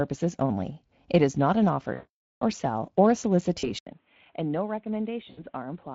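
Speech coded with Speex carries plainly audible codec damage from start to finish. The encoder has too few bits for the excitation, which fits a setting of around 20 kbps, so the voice comes out hoarse and grainy. Three bursts of VoIP packet loss concealed by the speech codec follow. When packets stop arriving, the decoder keeps extrapolating from its last pitch and filter while lowering the gain. The longest gap runs from 1.93 to 2.42 s, 480 ms long, between "is not an" and "or sell or a". There the sound stretches and fades and stays weak for a moment after packets resume. Shorter gaps at 3.59 to 3.65 s (40 ms), just after "or sell or a", and 5.29 to 5.44 s (80 ms) give brief smeared patches. From 3.79 s to the end, the input switched to a poorer device, likely a change to another microphone or a headset's call profile. An 80 ms silence marks the switch. After it nothing reaches above 3.8 kHz, so the sound turns dull and boxy. 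The level drops by around 10 dB, and a new background noise sits well below the speech.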